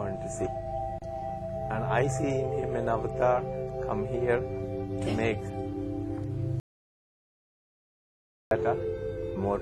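An audio dropout to silence runs from 6.6 to 8.51 s: the sound stops abruptly mid-flow and resumes just as suddenly, leaving about 1.9 s of silence with no room tone. The likely cause is a lost input while recording continued writing zeros.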